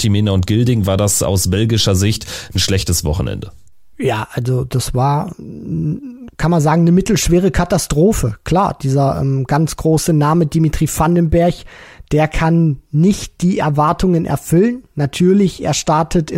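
Speech, with a rough ticking buzz at 20 Hz riding on the signal from 9.4 to 12.45 s, ending just before "nicht die". The resampler restarted on every 50 ms block, likely converting 44.1 to 48 kHz, leaving an error at each block edge.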